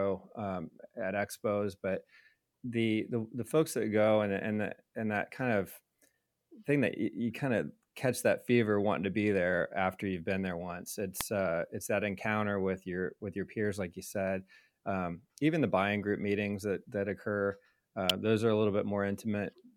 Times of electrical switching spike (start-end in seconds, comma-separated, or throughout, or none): 11.21, 18.09